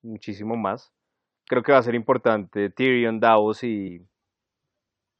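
At 3.87 s the speech hits a burst of damaged data in a compressed stream. A short run of bytes in the encoded file is corrupt, so the decoder cannot read the frames there correctly. It loses its place in the bitstream and has to hunt for the next valid frame header before normal decoding resumes. During that brief gap, the sound breaks up as a quick chirp, click or short hole cutting into the speech.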